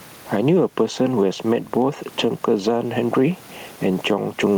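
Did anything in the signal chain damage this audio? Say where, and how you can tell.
Yes, there's gain pumping throughout the speech, with a gain swing of around 10 dB; the room noise sits about 36 dB under the voice. That's likely input gain set far too hot, with a fast limiter squashing the peaks.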